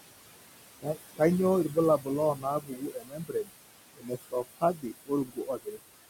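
From start to finish, the background pumps down between phrases and rises back under the speech. These are noise suppressor artifacts from frame-by-frame gain cutting the room noise by about 20 dB. Later, the speech itself turns faint and swallowed at 1.99–2.08 s, 2.35–2.45 s, 2.61–3.5 s, 3.97–4.86 s and 5.06–5.9 s, with dips of about 11 to 21 dB. This is speech cut by the noise suppressor, which mistakes quieter speech for noise sitting only about 12 dB below the voice.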